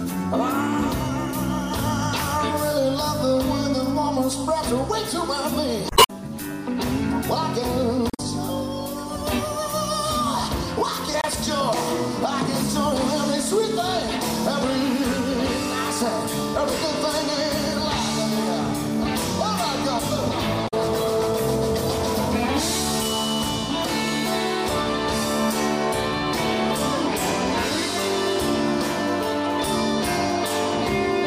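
Damaged data in a compressed stream disrupts the audio at 5.87–6.10 s, 8.07–8.20 s, 11.21–11.26 s and 20.64–20.74 s, where corrupted frames break decoder sync until the next frame header.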